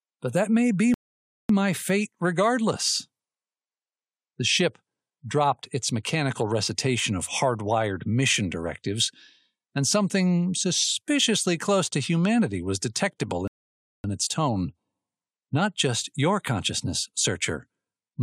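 At 0.94 s the speech halts in a rebuffering stall: playback drained its downloaded audio and waited about 0.55 s, until 1.49 s, before continuing. A second stall runs from 13.48 to 14.04 s, adding about 0.57 s. Each gap is clean silence, and the speech picks up at exactly the point where it stopped. Unlike a dropout or packet loss, nothing is skipped. The timeline is only stretched.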